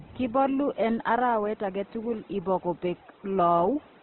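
Throughout the speech, nothing sits above 4.2 kHz, and tonal parts sound rough, grainy and noisy rather than swirly. The likely cause is heavy Opus compression in CELT mode, with starved bands filled by folding or noise, which fits a bitrate near 12 kbps.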